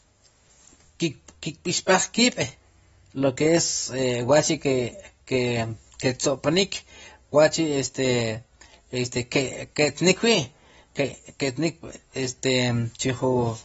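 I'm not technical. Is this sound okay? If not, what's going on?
No. The speech sounds dull and fizzy throughout, with nothing above 7.6 kHz. The likely cause is heavy AAC compression, which discards detail to save space.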